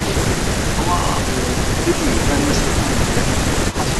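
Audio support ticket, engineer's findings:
System hang loop, 1.0 to 1.2 s: a 40 ms slice of speech repeats five times, giving a 25 Hz machine-gun stutter. Probable component: driver or host stall while the audio hardware kept replaying its ring buffer. About a fifth of a second of real audio is lost.

Echo leak, 3.71 to 3.77 s: a faint delayed copy of the speech, 139 ms behind and about 15 dB below it, heard as a brief scrap. Likely cause: the far end's echo canceller missed part of its loudspeaker pickup and sent it back.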